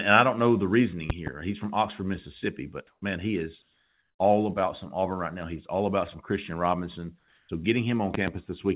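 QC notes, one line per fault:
1.10–1.30 s and 8.14–8.30 s, loud pop: each is a double pop, roughly 15 dB above the speech, the first just after "don't know the reasoning". A sudden voltage pulse, likely from a plug, switch or static, sits on top while speech continues underneath.
2.87–3.02 s, 3.62–4.19 s, 7.19–7.49 s, comfort noise in place of the background: the real background drops out for 150, 570 and 300 ms, replaced by smoother synthetic noise shaped roughly like the background. The level shifts by about +3, -2 and -3 dB. The likely cause is discontinuous transmission.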